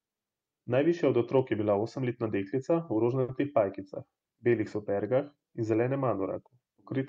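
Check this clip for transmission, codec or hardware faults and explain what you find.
One transmission fault is audible in this speech. From 3.21 to 3.30 s, after "bila osemletna deklica v", there is a short stall from a late packet. The jitter buffer ran dry, so the last sound was held for 70 ms. Speech then resumes at "pajkicah belih supergah" with nothing lost, but 70 ms later.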